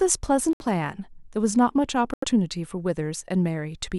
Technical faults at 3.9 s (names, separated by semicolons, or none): none